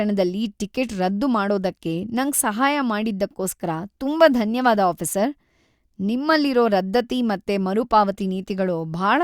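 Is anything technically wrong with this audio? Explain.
No, there's nothing technically wrong here, and this speech comes across without any fault to point to.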